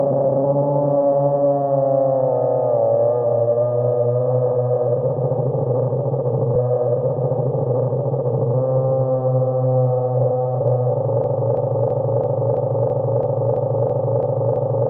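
It's a recording of sounds, and at 11.24 s it falls into a broken-record loop that runs right to the end. A slice about 332 ms long, roughly a third of a second, repeats back to back 11 times, with exact copies and no change at all. Whatever should have played in those last few seconds is gone. It's likely the player, encoder or stream stalled and kept pushing out the last chunk it had buffered.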